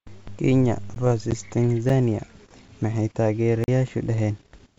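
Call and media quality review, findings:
Block of digital silence, output stage: buffer not filled in time, or invalid samples zeroed, so short runs of samples drop to silence with no fade. 0.95 s: about 15 ms hole, heard as a tick. 1.89 s: about 7 ms dropout, heard as a tick. 3.64–3.68 s: 40 ms gap, an audible hole.

Packet loss on an ADPCM call, 1.31–1.34 s: about one packet missing, roughly 10 ms replaced by silence. The decoder's adaptive predictor and step size lose sync with the sender's. The speech drops out abruptly, then returns with brief distortion before settling. The wideband G.722 path carrying it shows a faint upper-band hiss at most, which fits the 64 kbit/s mode.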